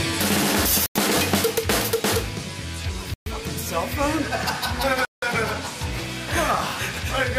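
At 0.86 s the audio drops to silence for 94 ms, then returns at 0.96 s. A second gap runs from 3.14 to 3.26 s, lasting 124 ms. The longest, 173 ms, falls between 5.05 and 5.22 s. Each is a Bluetooth stall. The cause is likely radio interference delaying packets until the headphones' buffer emptied. Playback then waited for the retransmitted data. Each gap is a clean cut to silence, with the sound resuming afterwards.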